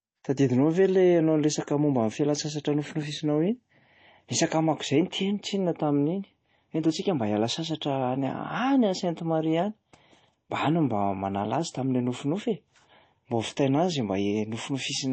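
From start to finish the speech has a hard ceiling at about 8.3 kHz and a watery, swirly texture, with s sounds going metallic and smeared. That's likely MP3 compression starving for bits, and the damage fits a bitrate around 32 kbps.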